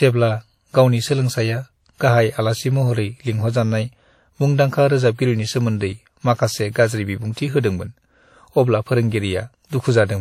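WMA compression damage runs through this entire speech recording. It sounds ringing and washy, with hiss that swells and fades with the signal and nothing above 16.2 kHz. The likely cause is a transform codec at a bitrate around 48 kbps, whose quantisation noise smears across each long block. Pre-echo appears at 1.98–2.00 s, 6.71–6.75 s and 7.33–7.37 s, where brief hiss of 28, 36 and 46 ms runs ahead of sharp attacks, softening them. Block-wide noise, sized for each loud onset, spills into the quiet moment before it.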